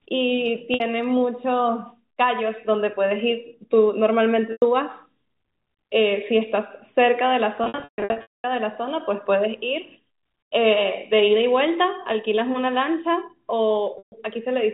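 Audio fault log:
0.74, 4.52, 13.98 s and 7.64–8.44 s: packet loss with pitch repetition. Lost stretches of 60, 100, 140 ms, and 620 ms scattered over 0.8 s, are patched by repeating the last pitch period, heard as a held buzz fading to silence on longer gaps.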